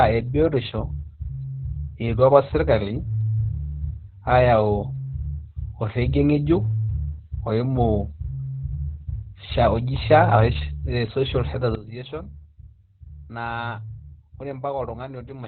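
From the start, the speech carries heavy Opus voice compression. Nothing survives above about 4.3 kHz, so it sounds narrowband and muffled. The SILK coder spends few bits on the excitation, which fits a rate near 8 kbps. Voices turn hoarse and faintly robotic.

At 11.75 s the level drops abruptly by about 12 dB and stays down to the end. Voice and background noise fall together in a single step. This is a sudden gain jump, likely from a gain change applied with no ramp.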